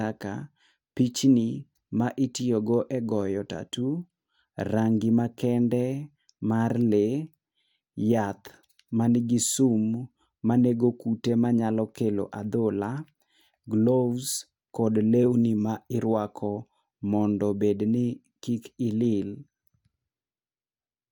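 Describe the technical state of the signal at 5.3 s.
At 5.3 s the signal is intact, with no dropout, distortion, clipping or other fault audible at that point.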